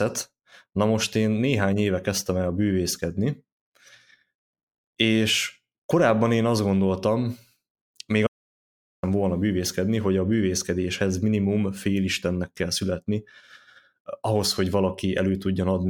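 An audio dropout to silence runs from 8.27 to 9.03 s, likely from the input being lost while recording continued. The speech cuts off abruptly and the gap carries no room tone. About 0.76 s of material is missing, and the speech resumes mid-flow at "volna bűvészkedni hogy a".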